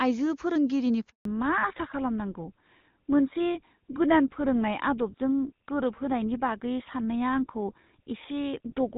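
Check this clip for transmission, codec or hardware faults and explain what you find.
Two faults are audible, both starting early in the call.

Handover gap, 1.09 to 1.25 s: the call was passed between networks and no speech frames arrived for 160 ms. The speech dies away within a few tens of milliseconds and stays silent until the new link starts, so that stretch of speech is lost.

Fallback to narrowband, from 1.25 s to the end: after the handover the call dropped from HD Voice to an older narrowband codec, which fits GSM full rate. Nothing above 4 kHz remains, so the speech turns duller and rougher than in the clean wideband opening.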